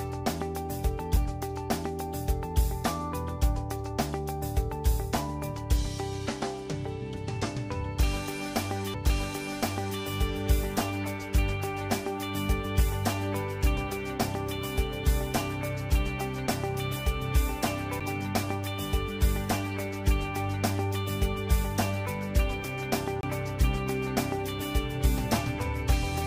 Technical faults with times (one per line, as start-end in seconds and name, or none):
1.16 CD skip
8.94 CD skip
18.00 CD skip
23.21-23.23 CD skip